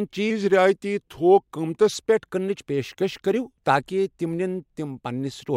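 Speech with a wrong sample rate from 0.30 to 1.94 s, just before "پٮ۪ٹھ کٕننٕچ پیشکش کٔرِو". Audio recorded at 48 kHz plays back at 44.1 kHz, so it runs at 0.92 speed and drops 1.47 semitones. Unlike a pure pitch shift, the tempo slows along with the pitch.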